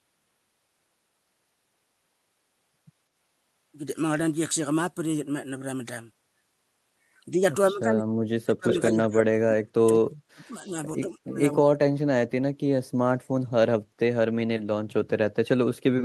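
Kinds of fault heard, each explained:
Speech suppressed in double talk: from 7.71 to 10.76 s the speech keeps sinking and breaking up, about two seconds of it affected in all, with the deepest drop a huge one of about 40 dB, and again from 11.07 to 11.68 s, around 0.4 s hit and dropping by about 25 dB. That's likely an echo canceller getting confused while both ends talk at once and pulling everything down, the wanted talker included.
Echo leak: inside that first suppressed stretch, a delayed copy of the speech sneaks through, trailing the original by 203 ms. The first scrap, 8.68 to 8.82 s, is surprisingly strong at about 5 dB below the speech, and a fainter one at 9.03 to 9.08 s sits about 20 dB down. Likely the far end's echo canceller letting some loudspeaker pickup slip back into the call during the double talk.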